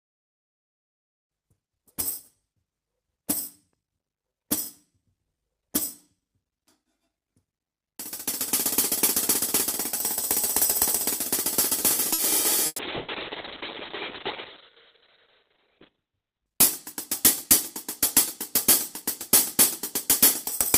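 At 12.13 s a short stall from a late packet begins and lasts until 12.21 s. The packet was late, so the jitter buffer emptied and the receiver stretched the last sound for about 50 ms until the data arrived. Playback then resumes from the same point with nothing lost, though the held portion buzzes slightly, and the whole stream now plays about 50 ms later than before.

A burst of packet loss follows at 12.66 s, running to 12.81 s. About 120 ms of audio never arrived. The receiver extended the last sound and faded it, producing a held buzz or fading hiss and then roughly 20 ms of silence before the audio picks up further along, with the middle section gone.

At 12.72 s, while that gap is still in progress, a call bitrate drop sets in. The encoder falls from 32 kbps to 6 kbps and stays at that floor for about 3.8 s, until 16.52 s. At 6 kbps the coding is coarse, and the audio band shrinks from 20 kHz to 4 kHz. 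The result is a muffled, rough and somewhat watery sound, with the upper frequencies stripped away for the whole stretch.

A second burst of packet loss occurs between 12.96 s and 13.11 s, also removing about 120 ms. This time the concealment bridges the whole gap with no silence: the last sound is carried forward as a fading buzz or hiss, and the audio resumes further on.

From 15.98 s to 16.53 s a jitter buffer speed-up drains extra buffered delay. The receiver cut out many short pitch-period slices, around 50 ms in total, so playback runs at about 108% speed with the pitch unchanged. Over that half-second the audio sounds slightly hurried, overlapping the end of the low-bitrate section.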